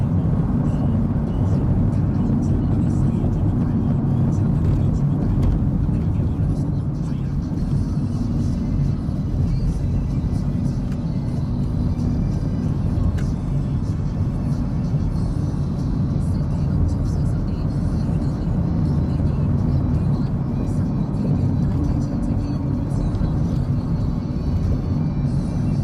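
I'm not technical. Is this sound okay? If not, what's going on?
No. Throughout the clip, hard clipping flattens the loudest moments, which crackle while quieter parts stay clean. Unlike background hiss, this roughness follows the loud peaks, because the signal was pushed past what the recording could hold and its tips were chopped off.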